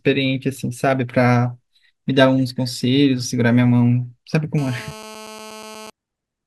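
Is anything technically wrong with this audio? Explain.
Yes. From 4.58 to 5.90 s a hard, raspy buzz sits under the speech at a steady level, about 18 dB below it, with a fundamental near 217 Hz and a dense stack of harmonics that pay no attention to what is being said. This is GSM phone buzz. A nearby 2G handset on a call transmits in bursts about 217 times a second, and the audio circuitry rectifies those radio pulses into the audible signal.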